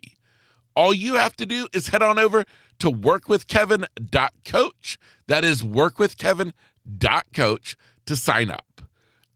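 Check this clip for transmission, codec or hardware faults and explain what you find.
Two short stretches of the speech turn briefly rough and grainy without any gap: from 5.33 to 5.47 s, and again from 8.31 to 8.33 s. Both are a lost packet rebuilt from error correction. Packets were dropped, and the following packet carried a low-bitrate backup copy that the decoder played in their place. That keeps the audio continuous but coarser. The first patch covers 80 ms, which fits four separate lost 20 ms packets. The second covers 20 ms, which points to a single packet.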